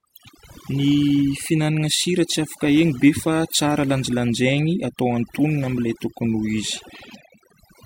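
Throughout the speech, gaps between phrases fall to near silence speckled with glittery chirps. This is overdone noise removal. The reduction was set so hard that individual frequency bands near the noise estimate were pulled down or muted, taking softer parts of the voice with them.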